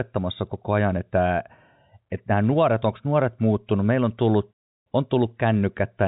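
No faults detected in the speech; nothing to report.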